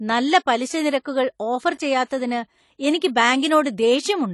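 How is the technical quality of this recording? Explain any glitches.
The recording is dull throughout: its detail is capped by an earlier lossy encoding that persists for the whole clip.

Throughout, this is likely low-bitrate audio saved at a high bitrate. A heavily compressed file was re-encoded to MP3 at a generous rate, which cannot bring back what the first pass discarded. The speech stops at 11.5 kHz and keeps that earlier encoding's artefacts, which fits a roughly 32 kbit/s AAC source.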